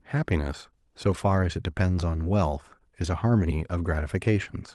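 No technical faults are audible anywhere in the recording.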